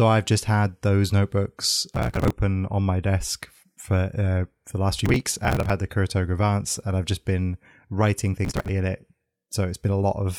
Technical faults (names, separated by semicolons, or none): processor overload crackle